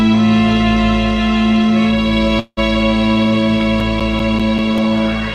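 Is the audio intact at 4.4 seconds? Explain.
No. CD scratch ticks run from 3.41 to 4.97 s: a disc blemish defeats error correction once per revolution, giving nine regular ticks, the longest around 10 ms.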